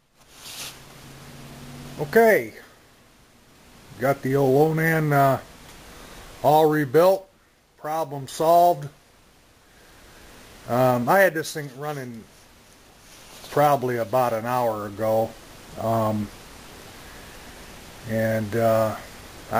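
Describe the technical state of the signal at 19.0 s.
At 19.0 s the signal is intact, with no audible fault at that moment.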